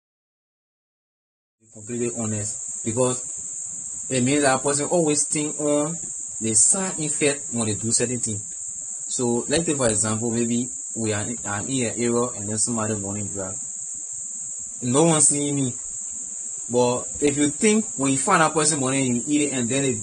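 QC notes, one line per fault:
throughout, AAC compression: likely low-bitrate AAC-LC coding, consistent with about 32 kbps, removes everything above 9.7 kHz, so the speech sounds dull and smeared, with fizzy, warbling sibilants.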